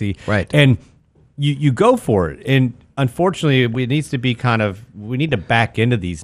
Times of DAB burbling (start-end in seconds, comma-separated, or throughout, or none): 3.74, 5.29-5.33